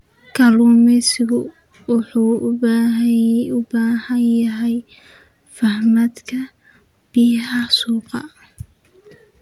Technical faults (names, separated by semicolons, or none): none